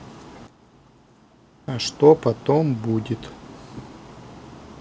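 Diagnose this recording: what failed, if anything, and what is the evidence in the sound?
A sudden gain jump in the digital processing: at 0.47 s the speech and the background noise drop together by about 12 dB, then return to full level at 1.68 s. The abrupt, joint step likely comes from a gain setting applied without a ramp.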